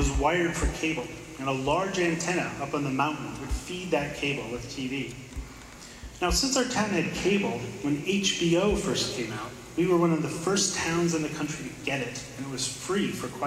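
Sample clock jitter runs throughout: roughly 0.7 microseconds of timing wobble adds a hiss about 40 dB down, rising on loud, bright passages and vanishing in silence.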